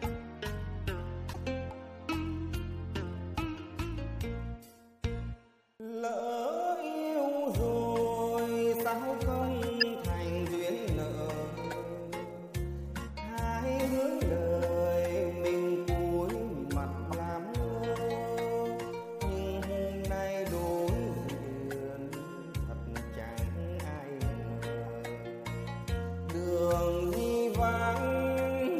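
Four short chirps and blips cut through the audio at 1.33 to 1.36 s, 9.80 to 9.83 s, 21.29 to 21.32 s and 24.86 s. The one near 9.8 s is loud, the first and third are moderate, and the last is barely audible. Each is a corrupt frame decoded: flipped bits in a compressed frame gave wrong gains or misread codes, so the decoder briefly put energy at the wrong frequencies for the length of a few damaged frames.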